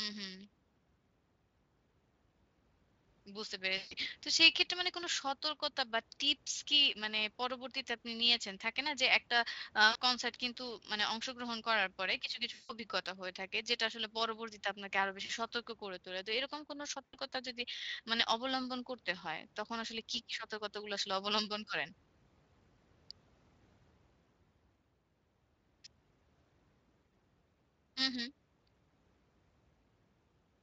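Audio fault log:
3.77–3.94, 9.91–9.97, 12.53–12.73, 15.25–15.31, 17.06–17.16, 27.09 s: VoIP packet loss concealed by the speech codec. Gaps of 140, 40, 160, 40, 80 and 40 ms are filled by the decoder stretching the last sound into a fading buzzy tone or coloured noise.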